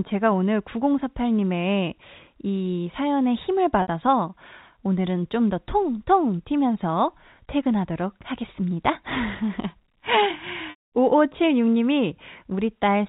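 At 3.82 s the speech holds briefly on one buzzy tone for about 60 ms. That is packet loss with pitch repetition: the receiver lost audio and filled the gap by repeating the last pitch period. A second loss at 10.7 s lasts about 220 ms. The repeated tone fades out within roughly 50 ms, leaving silence, and the speech returns with a short cross-fade at 10.9 s. The telephone band stays capped at 4 kHz throughout.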